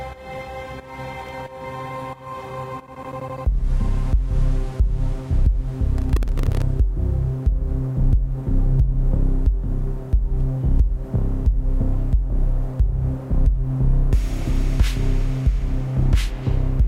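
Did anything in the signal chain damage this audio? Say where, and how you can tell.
Yes, processor overload crackle at the driver/buffer stage: bursts from 1.22 to 1.41 s and from 5.98 to 6.62 s. Missed buffer deadlines leave silent gaps roughly a millisecond or two wide. On a waveform these show as hard-edged dropouts, and on a spectrogram as vertical broadband streaks.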